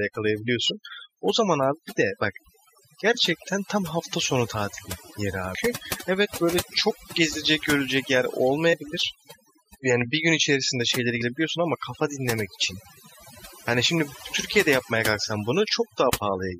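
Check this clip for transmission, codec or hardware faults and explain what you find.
Two faults are present in this speech recording. Overdone noise removal runs throughout: aggressive spectral gating switches bands off near the noise floor, leaving twinkling specks and a spectrogram with isolated, flickering time-frequency blocks. Damaged data in a compressed stream appears at 5.54, 8.72 and 11.20 s: the decoder loses frame sync on corrupted bytes, producing brief glitches, with a vertical broadband streak and a small waveform discontinuity at each.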